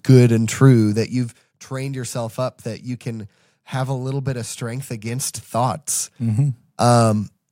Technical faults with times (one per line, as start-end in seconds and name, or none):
0.80-1.56 zipper noise
4.90-6.32 zipper noise